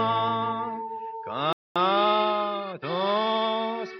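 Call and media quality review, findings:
Playback stall, 1.53 to 1.76 s: sound cuts out mid-flow, about 230 ms of silence, then resumes. Likely cause: player buffer underrun or blocked audio thread, so output starves until data returns.

Time-compressed catch-up, 1.76 to 3.28 s: audio hurried at 1.15x, pitch unchanged. Player drains backlog built during the stall by dropping short segments and cross-fading the joins.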